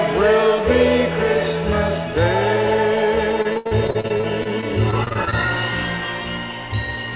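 From 3.42 to 5.34 s the sound turns choppy and robotic. This is repeated packet loss. Packets go missing or arrive late again and again. Each hole is patched by stretching the last sound forward, and the next hole arrives soon after. About a quarter of the span is patched, roughly 0.46 s, with 0.30 s lost outright. The longest single gap is 78 ms. The band stops at 4 kHz throughout, which fits a G.711 mu-law call path.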